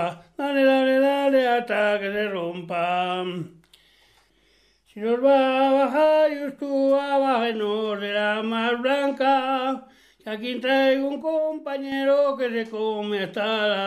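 At 11.22 s the level drops abruptly. It falls by about 5 dB between one sample and the next, with no fade. This is a sudden gain jump. The sound and the background noise sink together, so the floor itself gets quieter. The lower level holds until 11.92 s, when it snaps back up just as abruptly. The likely cause is a digital gain change, such as a setting or bit shift, applied without a ramp.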